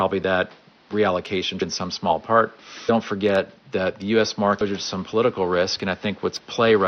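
Speech, with room noise sitting about 31 dB under the voice, and two short blips from damaged data in the compressed stream: one at 4.60 s, right after "forget that the", and another at 6.37 s. Corrupted bytes make the decoder misread frames, lose sync and hunt for the next header, so each comes out as a brief glitch.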